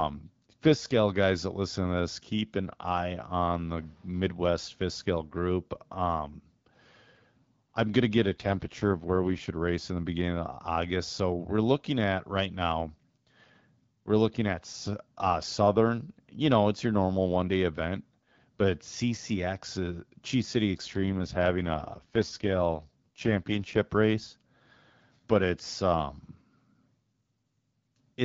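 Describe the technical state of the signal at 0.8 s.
At 0.8 s the speech is intact, carried cleanly through the AMR wideband (HD Voice) codec at 12.65 kbit/s with no fault at that moment.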